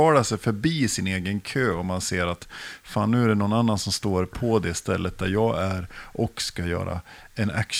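Nothing in this recording stands out as a technical fault; the speech just runs along without any glitch, dropout or distortion catching the ear.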